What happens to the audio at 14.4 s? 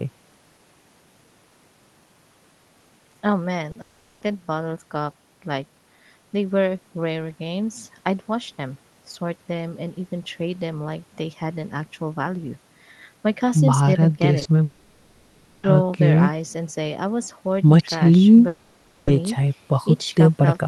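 Two consecutive short concealed packet losses, from 14.39 to 14.47 s: two 20 ms stretches of the call arrived too late for the decoder, which extended the preceding sound to cover each gap before rejoining the real signal. The result is a brief smeared wobble in the speech.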